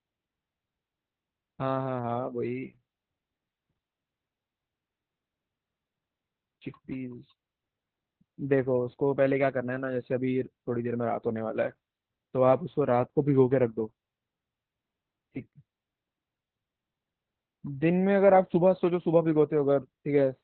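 Across the entire clip the speech carries heavy Opus voice compression. Nothing survives above about 4.4 kHz, so the sound is narrowband and muffled, consistent with the SILK linear-prediction coder working near 8 kbps in 20 ms frames. At that rate the excitation signal is coded coarsely, which makes the voice hoarse and slightly robotic.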